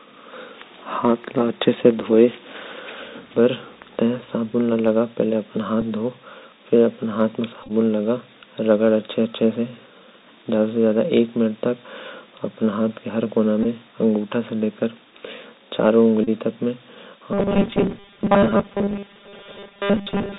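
Throughout the speech the sound is muffled and narrowband, with scratchy s sounds, a granular hiss under the voice and distortion on loud bright moments. This is the Bluetooth CVSD headset codec at 64 kbps. Its one-bit up-or-down steps pass nothing above 4 kHz, and the step size lags behind fast, loud changes.

From 2.98 to 4.98 s a faint buzz with a hashy edge sits about 40 dB below the speech. This is video or display buzz: a screen or video cable couples into the audio path at its 59.94 Hz field rate, and the harmonics above that rate give the hash.

Bluetooth headset packet repeated shows up as brief ticks and buzzy blips at 5.81 s, 7.63 to 7.72 s, 13.63 to 13.66 s, 16.24 to 16.29 s and 17.55 s. Lost voice packets were replaced by decoding the previous packet again. The 7.63 s event is the roughest: about 49 ms lost across 67.5 ms, with runs up to roughly 20 ms that hum near 267 Hz.

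From 17.33 s to the end, the voice turns rigid and metallic, locked to a 200 Hz buzz while still loosely following the speech. This is robotic sound from repeated short buffers. Most of the audio is likely being replaced by repeats of a 5 ms buffer while new audio arrives too late.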